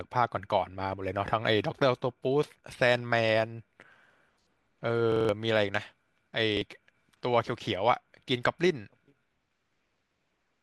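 At 5.12 s a repeated buffer stutters until 5.29 s. New audio arrived late, so one 43 ms piece, which fits a 2048-sample buffer, plays five times with hard joins. Roughly 150 ms of speech is lost. At 6.57 s one piece repeats once.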